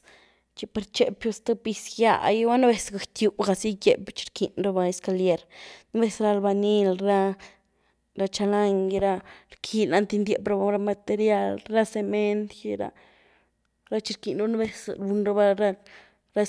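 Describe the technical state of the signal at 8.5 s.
At 8.5 s the signal is intact, with the speech continuing cleanly and no audible fault at that point.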